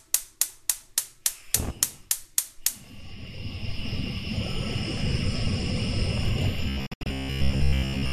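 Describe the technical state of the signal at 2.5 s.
At 2.5 s the signal is intact, with no audible fault at that point.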